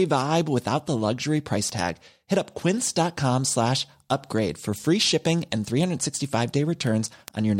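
Speech carrying word clock ticks from 0.25 s to 7.49 s: sharp ticks of uneven strength at a steady rate of roughly five per second, about forty in all. The receiving device is running on its own clock rather than locking to the digital sender, drifting by something around 100 ppm, so a single sample is dropped or repeated each time the clocks slip. The steady spacing separates this from random clicks or crackle.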